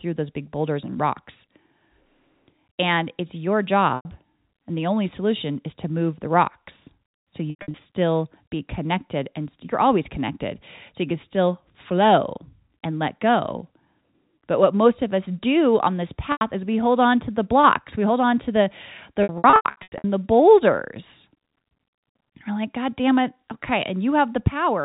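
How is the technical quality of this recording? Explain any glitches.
The recording has four dropouts from packet loss with pitch repetition, heard through narrowband telephone coding that cuts everything above 4 kHz.

Packets went missing at 3.96 s (90 ms lost), at 7.50 to 7.74 s after "move the rocks so" (180 ms lost in gaps of up to 90 ms), at 16.32 s between "us do on this" and "is we hold on" (90 ms), and at 19.23 to 20.04 s between "hold on to the" and "the boulders" (450 ms lost in gaps of up to 90 ms). Each gap's length fits runs of 30 ms packets. The receiver fills each gap by repeating the last pitch period and fading it out over about 50 ms. So each dropout is a brief buzzy, held tone that sinks toward silence before the speech cross-fades back in. The last stretch sounds choppiest.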